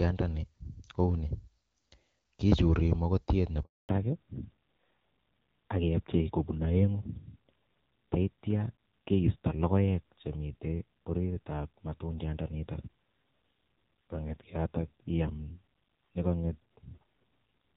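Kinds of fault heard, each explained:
Handover gap: at 3.63 s the speech cuts out for 260 ms while the call switches networks, and no frames arrive until the new link resumes.
Fallback to narrowband: from 3.89 s the call drops from HD Voice to a narrowband codec, so everything above 4 kHz disappears and the speech sounds duller and rougher.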